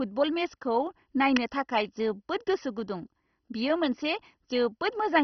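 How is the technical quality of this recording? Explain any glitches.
The recording is technically poor, held back by heavy codec damage throughout and one brief electrical click.

Across the whole speech clip there is MP2 compression damage of a heavy kind. The sound is dull, with nothing above about 6.1 kHz, and carries a gurgling, granular texture. This is likely MPEG Layer II coding starved of bits, which fits a rate around 32 kbps: the upper sub-bands are switched off entirely, and the bands that remain are coarsely quantised and flicker in and out.

At 1.37 s there is an electrical switching spike, a sharp click lasting only a few milliseconds and sitting on top of the speech rather than replacing it. The likely cause is a nearby switch, motor or static discharge arcing briefly, with the audio line picking up that burst as an added transient.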